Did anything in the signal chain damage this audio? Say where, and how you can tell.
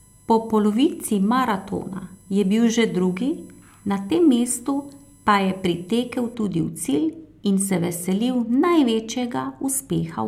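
Yes: USB whine in the analogue wiring, 0 to 6.34 s. A fixed tone on 1 kHz harmonics peaks at 11 kHz, as 1 ms bus frames leak through power or ground.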